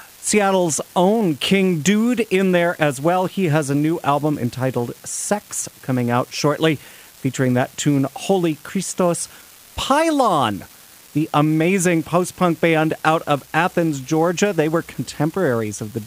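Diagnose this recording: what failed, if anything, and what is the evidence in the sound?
Unreliable data bit at the converter. Equal-sized spikes, about -28 dBFS, crackle steadily through speech and pauses alike. One marginal data line flips at random.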